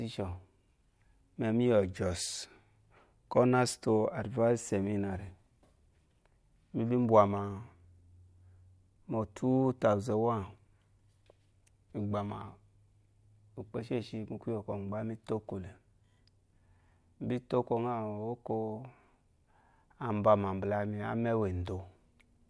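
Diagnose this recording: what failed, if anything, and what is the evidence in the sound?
Nothing failed; no fault is audible in the recording.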